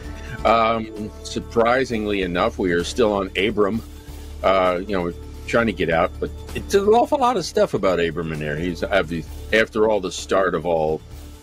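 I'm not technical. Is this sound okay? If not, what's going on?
Yes, I listened closely and nothing in it stood out as a problem.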